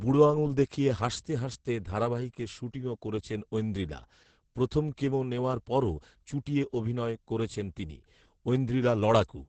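It's a speech clip with heavy Opus voice compression all the way through: the band stops around 8 kHz and the coarse SILK coding leaves it muffled, hoarse and slightly robotic, which fits roughly 10 kbps.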